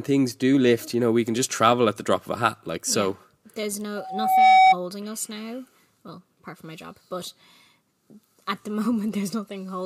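At 3.96 s a steady tone near 754 Hz rises out of the speech, swelling over about half a second into a piercing squeal that ends up roughly 10 dB louder than the talker before it cuts off at 4.76 s. This is loudspeaker feedback squeal: the microphone was picking up the loudspeaker it was driving, and at 754 Hz the loop gain went above one, so that single frequency kept reinforcing itself until it stopped.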